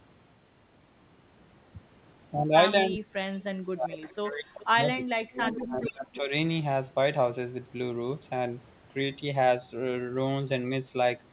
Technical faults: speech suppressed in double talk; echo leak

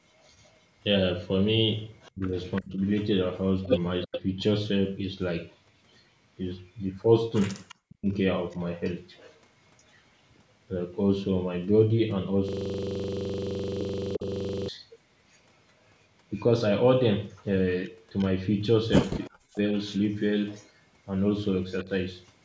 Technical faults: echo leak; speech suppressed in double talk; system hang loop

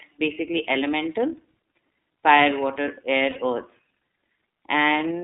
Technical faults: iLBC codec; lost iLBC frames

